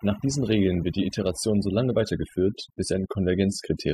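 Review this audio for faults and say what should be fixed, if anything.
Overdone noise removal runs through the whole clip. The noise reduction was pushed so hard that any frequency band sitting near its noise estimate gets pulled down or muted, and the softer parts of the speech are taken out along with the noise. Between phrases the background drops to near silence dotted with twinkling specks. On a spectrogram the floor looks scrubbed black, scattered with isolated bright dots, and the speech harmonics appear ragged and broken up. To prevent it, apply gentler reduction with a smaller attenuation depth, and compare the processed and unprocessed audio before committing.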